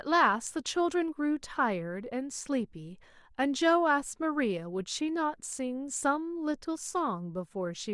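No technical faults can be heard anywhere in this recording.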